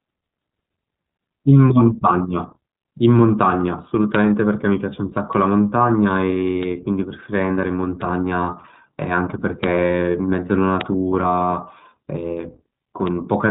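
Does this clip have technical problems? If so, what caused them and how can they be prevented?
Yes. The iLBC codec runs throughout. Nothing passes above about 3.8 kHz, and each short block of speech is coded independently, which fits 20 ms frames at roughly 15 kbps, leaving plainly audible rough, synthetic texture. Prevent it by using a wideband codec at a higher bitrate.

Bit error spikes are heard as single sharp ticks at 5.33, 6.63, 8.02 and 10.81 s. A flipped bit makes one sample, or three in the last case, jump by a power of two and snap back, giving a broadband click unrelated to the speech. Prevent them with error-checked memory and links.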